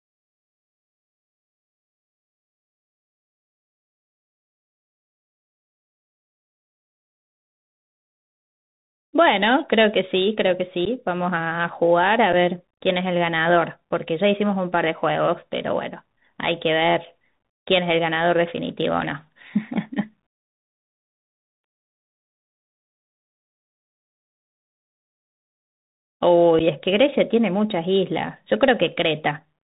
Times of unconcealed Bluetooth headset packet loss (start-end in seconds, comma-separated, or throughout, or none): 10.85-10.88, 12.33, 26.59